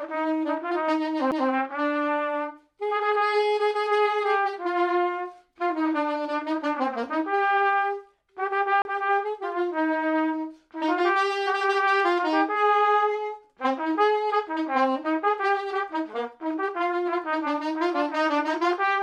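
At 1.31 s a CD skip occurs: the laser jumps to another turn of the disc's spiral, so playback mutes for just a few milliseconds, leaving a tick, and resumes from a different point. A second CD skip at 8.82 to 8.85 s has a longer silence of roughly 30 ms. Unlike a plain dropout, where the sound carries on in time after the gap, here the audio picks up somewhere else, jumping by whole disc revolutions.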